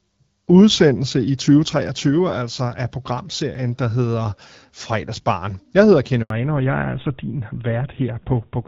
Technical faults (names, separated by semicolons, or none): handover gap; fallback to narrowband